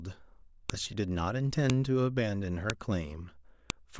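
Sharp clicks land at 0.70, 1.70, 2.70 and 3.70 s, one per second: a file header played as audio, with each joined piece's header bytes snapping through as samples.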